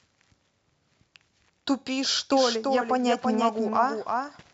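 From 2.32 s to the end, every sound repeats about a third of a second later, a little quieter and unreverberant: a doubled audio track, likely from a second, slower capture path.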